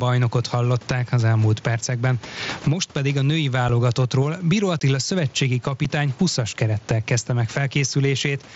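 Throughout the speech, gain pumping swings the level by around 10 dB, likely from excessive gain driving a fast limiter.

At 3.69 s, 4.80 s and 5.85 s, unconcealed Bluetooth headset packet loss leaves hard-edged holes of 7.5 ms, 15 ms and 7.5 ms. These lengths point to one or two dropped frames, and the gaps are not filled or smoothed, unlike concealed loss.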